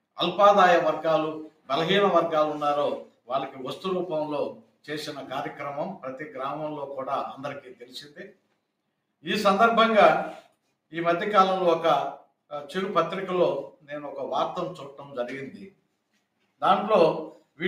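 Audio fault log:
throughout: noise suppressor applied to music or sounds. A speech-oriented suppressor stays engaged across the clip, treating sustained and ambient content as noise. Its gain keeps shifting by around 5 dB, so held material pumps and thins while transients pass largely intact.
1.49–1.69 s, 3.05–3.30 s, 4.54–4.77 s, 7.68–8.53 s, 13.72–13.89 s: sound cut by the noise suppressor. At each point the suppressor misreads steady or decaying sound as noise and pulls it down by as much as about 12 dB, sinking the level and truncating tails. The longest dip, near 7.7–8.5 s, spans roughly half a second.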